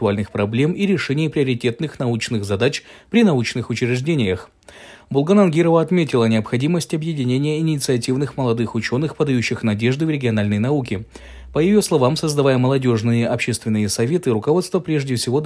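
Nothing stood out as a technical fault anywhere in the recording on listening.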